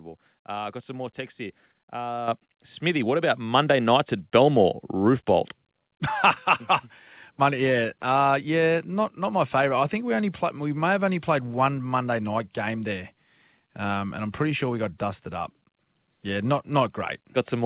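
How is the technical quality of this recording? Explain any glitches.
Two sudden jumps in input level stand out, heard over a telephone-band sound with nothing above 4 kHz, which fits a G.711 mu-law call path at 64 kbps.

Microphone volume stepped up, at 2.28 s and again at 3.3 s: the call software judged the microphone too quiet and raised the device's input gain in a single step, by about 8 dB and then about 4 dB. The speech and the background noise get louder together at that instant and stay there. That shared, instantaneous rise sets it apart from a talker moving closer, which lifts only the voice, and from a smooth gain ramp.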